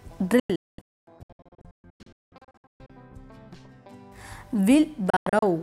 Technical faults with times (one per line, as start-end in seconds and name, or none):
0.40-2.90 digital broadcast dropout
5.10-5.43 digital broadcast dropout